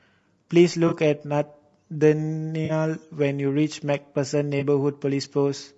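From start to finish the speech has a rough, grainy texture, with noise filling the gaps between voice harmonics and a thin, synthetic-sounding top band. This is most likely low-delay AAC compression of the AAC-ELD kind. Its short frames cannot resolve pitch harmonics finely, and the damage is plainly audible, which fits a low bitrate around 32 kbps. The artefact is steady graininess rather than the swirly, watery warble of a long-frame codec starved of bits.

At 0.87 to 0.93 s comes the first AAC frame loss with concealment. The decoder stretches the last good spectrum across the gap, so the sound smears into a brief noisy, phasey blur instead of dropping to silence. The gap lasts about 40 ms, which fits two lost frames. The same happens at 2.65 to 2.71 s. A shorter patch at 4.59 to 4.63 s points to a single lost frame. The smearing, rather than a click or a hole, is what marks these as concealed losses and not plain dropouts.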